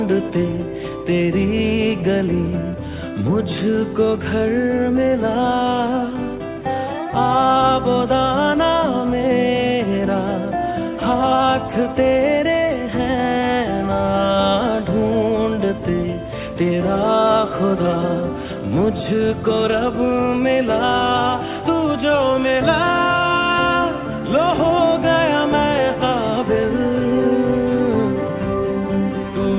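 Nothing in this audio points to a technical fault: the signal stays steady and intact throughout, with no audible interruption, distortion or level problem at any point.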